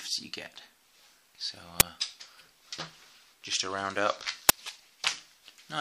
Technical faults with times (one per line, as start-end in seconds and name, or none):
1.80 uninitialised buffer
4.49 uninitialised buffer